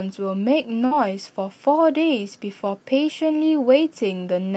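At 0.85 s there's a burst of packet loss lasting to about 0.94 s. The receiver papers over roughly 56 ms by stretching the last sound and fading it out. Then the speech jumps ahead, with about 60 ms gone, over the call path's Opus-like 8 kHz top end.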